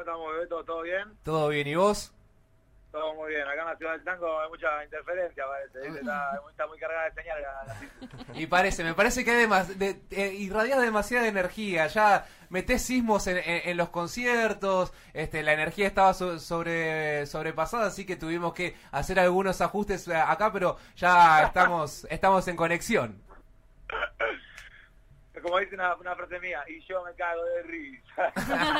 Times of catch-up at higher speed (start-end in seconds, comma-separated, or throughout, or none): none